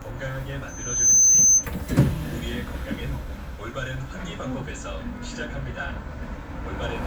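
At 0.68 s a loudspeaker feedback squeal begins. A microphone is picking up the speaker it feeds. At 6.2 kHz the loop gain has passed one, so that frequency keeps reinforcing itself. It grows from nothing to a piercing whistle in roughly 0.4 seconds. At its peak it sits some 15 dB above the rest of the sound. The tone holds steady and dominates everything. It stops at 1.68 s.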